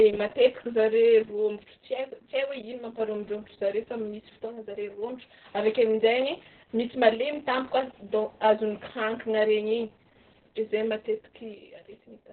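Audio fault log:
Throughout: Opus voice compression, heavily squeezed, with nothing above 4.2 kHz, so it's muffled, hoarse and a bit robotic, which fits narrowband SILK at roughly 6 kbps.
4.46 to 5.44 s: one channel drops out. The level falls abruptly by about 6 dB until just before "avy akeo", likely from one stereo side going missing before the mono sum.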